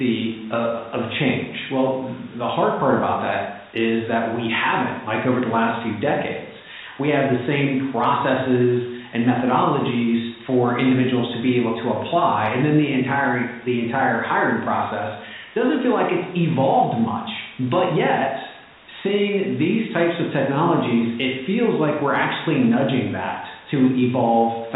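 Speech over a call line, with no faults heard.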